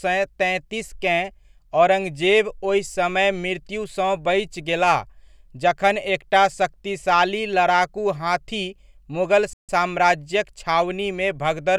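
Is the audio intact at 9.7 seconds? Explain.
No, a playback stall from 9.53 to 9.69 s, after "शक्तिशाली लड़ाकू हाथी मुगल", cuts the speech to silence for about 150 ms, likely because the player ran short of data.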